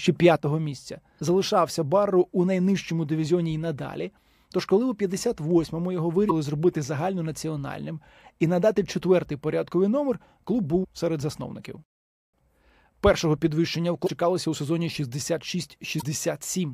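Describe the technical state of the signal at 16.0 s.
At 16.0 s the level has been sitting about 6 dB low since 0.36 s, a drop that runs to the end of the clip and is most likely one channel dropping out, so the mono sum keeps only half of the shared material. On a waveform this shows as an abrupt, persistent step down in amplitude.

Within that stretch, from 15.98 to 16.03 s, damaged data in a compressed stream makes the decoder misread frames and lose sync, producing a short chirp or blip. A spectrogram shows a brief smeared, broadband patch breaking the speech harmonics.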